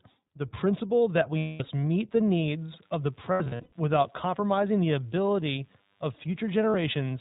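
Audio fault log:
Throughout: iLBC codec. Nothing above 4 kHz comes through, so the speech is dull and narrowband, with a rough, slightly synthetic edge that is plainly audible. This fits iLBC in its 20 ms frame mode at about 15 kbps. Unlike a transform codec, it leaves no swirling or watery smearing. The roughness comes from modelling the excitation frame by frame, and each frame is coded independently of the one before.
1.38–1.63 s, 3.32–3.74 s, 6.70–6.75 s: lost iLBC frames. At 1.38 s, 220 ms of audio drops out and is filled by the decoder repeating the last pitch cycle mixed with noise. The result is a held, buzzy-breathy vowel that fades as the loss goes on. Between 3.32 and 3.74 s, 280 ms is lost in scattered runs, the longest around 100 ms, giving several short buzzy stalls. At 6.70 s the gap is 40 ms and barely more than a blip. Unlike a dropout to silence, each gap is filled, and the speech recovers almost at once afterwards because every frame stands alone.
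2.44 s to the end: DECT cordless phone buzz. A thin, steady buzz at 100 Hz starts and stays, rich in harmonics and faint, roughly 40 dB below the speech. A nearby DECT handset or base sends a radio burst every 10 ms, and the audio circuitry rectifies it into sound. Mains hum sits at 50 or 60 Hz and sounds smoother. This buzz is harsher and more rasping, and it starts partway through rather than being present from the beginning.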